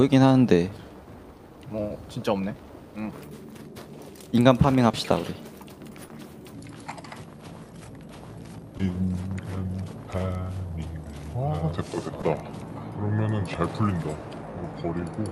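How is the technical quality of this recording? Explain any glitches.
The recording has two kinds of technical fault: repeated short concealed packet loss and a long section at the wrong speed.

Short concealed packet loss occurs at 1.37, 4.91, 6.07, 8.77 and 12.21 s. Each time about 20 ms of audio failed to arrive in time, and the decoder filled the gap by extending the preceding sound before crossfading back. Each event is heard as a brief smear or wobble. On a spectrogram, each one shows as a short stretch of frozen, smoothed harmonics or shaped noise. The waveform shows a small repeated-looking segment.

A section at the wrong speed runs from 6.54 s to the end. It plays at 0.75 times normal speed, so everything is slower and roughly five semitones lower. The most likely cause is a playback or editing clock mismatch that stretched that portion. On a spectrogram, all partials shift downward and features widen in time from 6.54 s onward. 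The waveform looks visibly drawn out.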